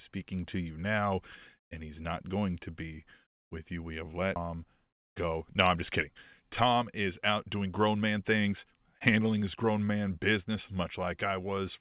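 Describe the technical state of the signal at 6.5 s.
At 6.5 s the signal is inside a jitter buffer speed-up that runs from 6.39 s to 9.64 s. The receiver's buffer had built up more audio than it targets, so it repeatedly cut out short stretches one or a few pitch periods long, trimming around 300 ms in total. The speech plays about 8% fast at unchanged pitch and sounds hurried. The band stops at 4 kHz throughout, which fits narrowband G.711 mu-law call audio.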